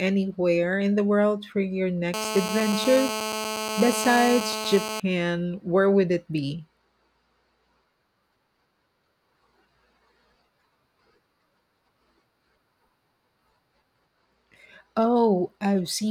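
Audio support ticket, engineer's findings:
GSM phone buzz, 2.14 to 5.00 s, just after "the world for your". Hard, raspy 217 Hz buzz, harmonic-rich, steady, about 6 dB below the speech. Nearby 2G handset on a call; its TDMA bursts are rectified in the analogue input stage.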